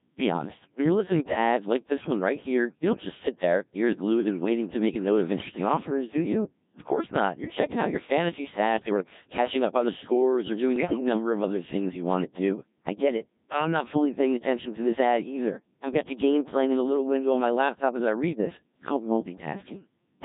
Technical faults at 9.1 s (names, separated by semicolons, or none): Codec 2 vocoder; bit errors on digital voice radio